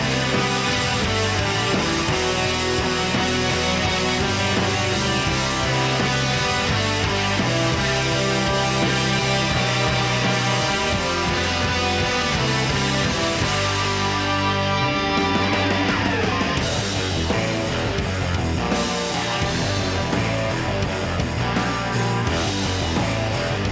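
No technical faults are audible.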